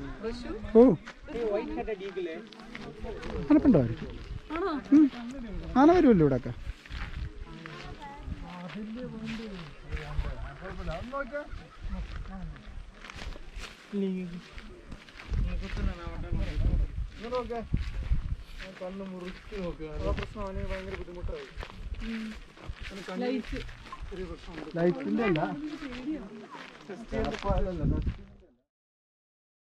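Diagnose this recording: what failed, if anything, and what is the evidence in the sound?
Nothing stood out on listening, and the smooth fade-out that begins around 27.5 s and finishes at 28.72 s brings the sound down gradually with no click or hard edge.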